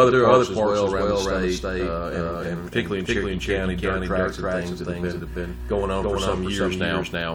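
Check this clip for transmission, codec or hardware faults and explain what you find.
One fault runs through the whole clip: a doubled audio track. A full-band copy of the sound trails the original by about 300 ms at roughly equal loudness, probably from a second, slower capture path or misaligned edit copies. Every onset gets a dry, uncoloured repeat. On a waveform each transient appears twice; on a spectrogram every event is duplicated, shifted right by the same gap.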